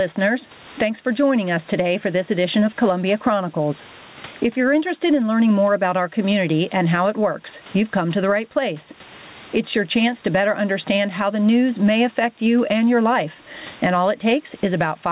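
Right through the speech there's gain pumping. Every time the talker gets loud, the level gets yanked down, and the room noise sits about 34 dB under the speech. The swing is around 20 dB, and the whole thing sounds squashed and breathing. The likely cause is input gain set way too hot with a fast limiter or compressor clamping it. The narrowband call path, which stops dead at 4 kHz, makes everything sound dull.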